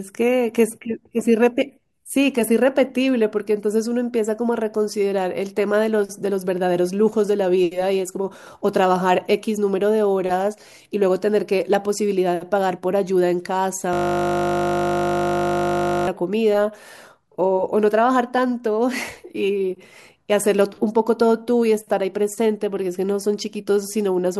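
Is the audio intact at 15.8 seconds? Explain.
No. From 13.93 to 16.07 s the speech becomes a steady 50 Hz buzz, a system hang loop: a frozen driver replaying one 20 ms buffer over a hundred times.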